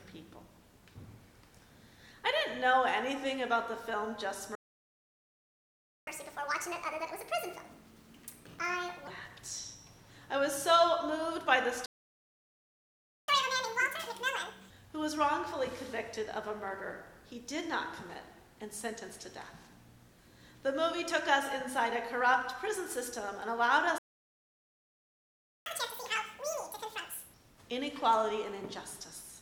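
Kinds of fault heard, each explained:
Playback stall: the sound cuts out mid-flow at 4.55, 11.86 and 23.98 s for about 1.5, 1.4 and 1.7 s, likely because the player ran out of data or was blocked. Waveforms show flat silent gaps, and spectrograms show blank vertical bands.
Catch-up at higher speed: after each gap the backlog is played faster to recover lost time, at 1.5 times speed (roughly seven semitones higher) from 6.07 to 9.07 s, then double speed (about ten semitones) after 13.28 and 25.66 s. Spectrogram bands shift upward while waveform detail appears compressed.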